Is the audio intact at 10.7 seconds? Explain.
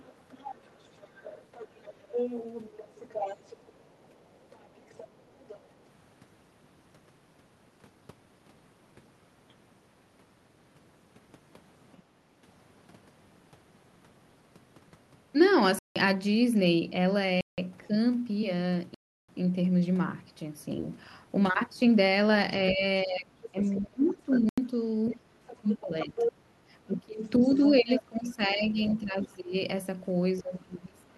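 Yes, the speech at 10.7 seconds is intact, with no dropout, glitch or other fault at that point beyond the ordinary band-limited character of the call path.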